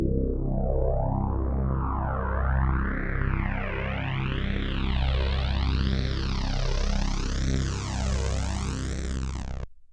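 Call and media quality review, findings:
Nothing to flag on this one: the everyday sound comes through steady and intact, with no dropouts, glitches or level jumps picked up anywhere in the review.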